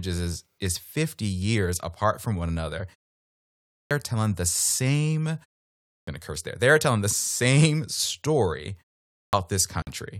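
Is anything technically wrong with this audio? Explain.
Yes. Clipped start after a pause occurs at 3.72 s before "are telling the same", at 5.86 s between "are telling the same" and "to curse there they", and at 9.14 s after "telling the same story". The sleeping output device wakes late, swallowing about 190 to 210 ms of onset. The waveform jumps straight from flat silence into the speech, with no rising edge.

A gap at a join of encoded pieces appears at 9.82 s, a 50 ms silence from untrimmed encoder delay and padding. It shows as a thin, slightly smeared vertical blank in the spectrogram.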